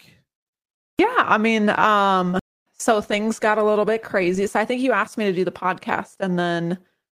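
At 2.39 s a stream reconnect cuts the speech for 0.26 s. The connection dropped and restarted, so the speech resumes about a fifth of a second later.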